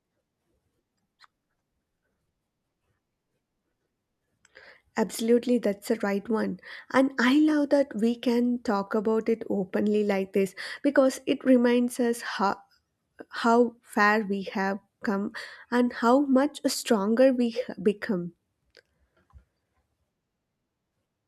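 No technical faults can be heard anywhere in the recording. There is nothing to place on a timeline, since no moment in the audio stands out as going wrong.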